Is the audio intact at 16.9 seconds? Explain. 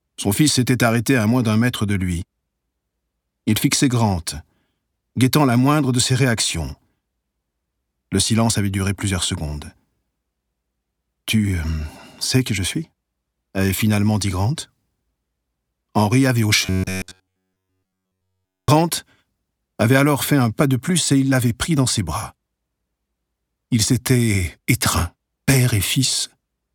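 No. From 16.66 to 18.68 s the sound turns into a rigid, metallic buzz locked at a steady pitch of 93.8 Hz, and it only loosely traces what it replaces. This is robotic sound from repeated short buffers. The likely cause is new audio arriving too seldom, so playback kept repeating a fragment of about 10.7 ms, one cycle of that buzz, while the real audio was skipped. Essentially everything in that span is repetition.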